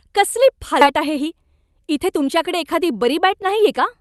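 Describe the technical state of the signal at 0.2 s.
At 0.2 s the speech is intact, with no dropout, glitch or distortion, and the call path's Opus coding is passing it normally with its high end topping out around 12 kHz.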